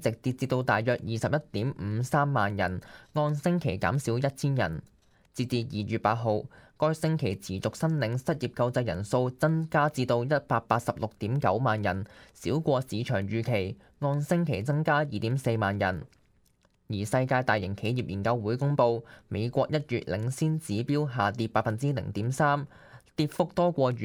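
No technical faults are audible.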